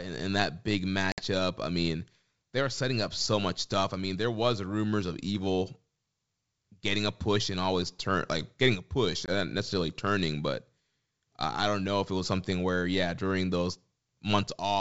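Speech, over a clean wideband G.722 link, has packet loss on an ADPCM call at 1.12–1.22 s (60 ms missing, a few packets) and 9.26–9.30 s (20 ms, about one packet). Each shows as a sharp-edged flat gap in the waveform and an empty vertical strip on the spectrogram. Slightly distorted speech follows briefly while the decoder's predictor and step size realign with the sender's.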